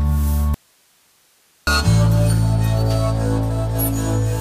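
Audio dropout to a faint residue, 0.54 to 1.67 s: abrupt cut to hiss about 40 dB down, likely upstream signal loss; flat waveform gap.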